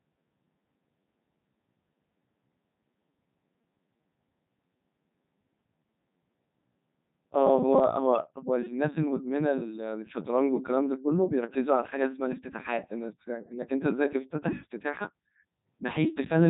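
From start to finish the speech carries Codec 2 vocoder damage, and it is heavy. The decoder rebuilds the voice from sine waves driven by pitch, voicing, energy and a spectral envelope, so the original waveform is gone and the result sounds robotic and buzzy. That resynthesis, rather than smeared or warbling detail, separates it from an ordinary low-bitrate codec. Nothing remains above 3.8 kHz, which fits the 3.2 kbit/s mode.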